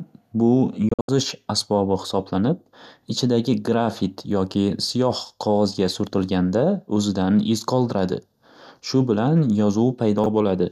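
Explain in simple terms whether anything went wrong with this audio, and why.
Two things went wrong in this speech recording. First, a digital broadcast dropout: the receiver briefly lost good data and muted itself. Between 0.89 and 1.09 s the speech cuts out in several short holes, the longest about 72 ms, and those moments are gone for good.

Second, chunks out of order: near the end, a 20 ms slice of audio was delivered late and played three slices after where it belonged. Between 10.18 and 10.26 s this sounds like a brief jumbled stutter.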